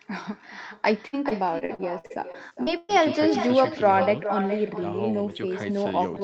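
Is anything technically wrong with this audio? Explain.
Yes, there are two faults.

Echo with no canceller runs through the whole clip. At the far end, the loudspeaker's output is picked up by the microphone, and nothing subtracts it. Each phrase therefore returns after the network round trip, around 400 ms later, at about 9 dB below the original. Every line is trailed by a fainter, thinner duplicate of itself, which blurs the speech.

Repeated packet loss, with its robotic sound, runs from 1.07 to 2.91 s. In that stretch the audio drops out about a dozen times. The longest dropout is 118 ms, and roughly a quarter of the span is filled with concealment. The decoder covers each hole by stretching the last sound it received, and the next hole arrives almost at once. The speech turns choppy, with fragments missing, against a band that already stops at 8 kHz.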